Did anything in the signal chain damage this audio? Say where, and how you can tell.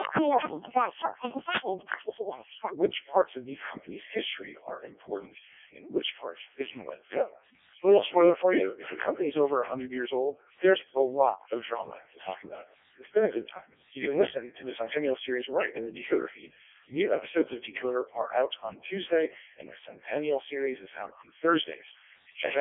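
Yes. At the codec stage, the whole clip has the robotic, buzzy quality of a Codec 2 vocoder. The speech is resynthesised from pitch, voicing and envelope data rather than kept as a waveform, and the heavy damage fits its lowest rate, about 0.7 kbit/s. The band runs roughly 250 Hz to 3.4 kHz, with nothing above 3.6 kHz.

At playback or editing, a section at the wrong speed runs from 0.00 to 2.73 s, ending just before "which parts of these". It plays 1.82 times too fast, with pitch raised by about ten semitones, likely from the section being clocked at the wrong rate.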